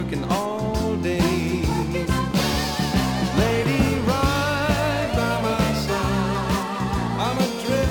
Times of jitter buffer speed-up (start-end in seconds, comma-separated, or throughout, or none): none